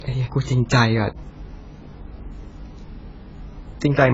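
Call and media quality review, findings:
AAC compression, whole clip. Speech dull and smeared. Warbling, fizzy texture on sustained sounds and sibilants. Likely cause: AAC-LC encode at a low bitrate. Heavy damage, which fits a 16 kbps setting. Encoder lowered the cut-off and quantised hard against its hearing model, leaving spectral holes.

Dropped samples, 0.79 s. Single sharp click. Thin vertical line across the spectrum. Nothing audibly missing. Likely cause: a lost sample in the stream, roughly one, around 0.02 ms. Waveform jumps straight to a later value, and that step produces the click.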